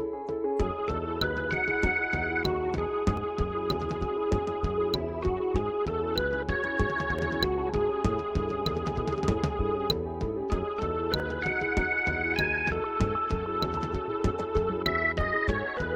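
The audio was handled in 4-second chunks, and each new chunk began about 13 ms before the previous one had finished, so this is a case of overlapping chunks. At every join, that 13 ms sliver of sound plays twice in a row. The result is a brief click or tiny stutter that recurs at a steady 4-second spacing, heard at 3.17 s, 7.19 s, 11.20 s and 15.21 s.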